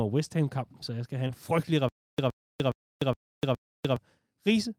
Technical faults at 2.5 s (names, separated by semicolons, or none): stutter with silent gaps